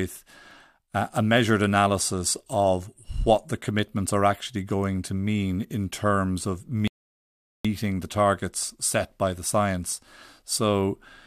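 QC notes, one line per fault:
6.88–7.65 s, rebuffering stall: after "mean in terms of" the speech drops to silence for 0.77 s, then picks up cleanly with "the targets set by". The player ran dry of downloaded audio and waited, so nothing is skipped but the pause is added.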